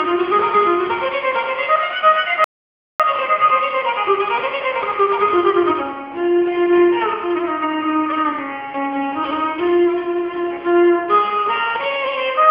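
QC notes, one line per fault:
2.44–3.00 s, audio dropout to silence: the sound stops abruptly mid-flow and returns just as abruptly about 0.55 s later. The gap is silent. No room tone or noise floor remains underneath. That points to the input being lost while recording or encoding carried on writing zeros, likely from a brief disconnection, link failure or accidental mute. Whatever sounded during that half-second is gone and cannot be recovered from this file.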